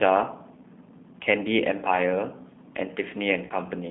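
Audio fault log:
Throughout: G.729 codec. The sound is rebuilt from a vocal tract filter, a pitch predictor and a few pulses per frame, which fits an 8 kbit/s rate and leaves speech plainly rough and synthetic. A spectrogram shows a hard band from 200 Hz to 3.6 kHz with empty space above.
3.47 to 3.53 s: VoIP packet loss concealed by the speech codec. About 30 ms of audio goes missing, and the decoder stretches its last pitch and filter into a buzzy tone or coloured noise that fades, staying weak as frames rebuild. The spectrogram shows frozen, flattened harmonics, and the waveform shows a shrinking envelope.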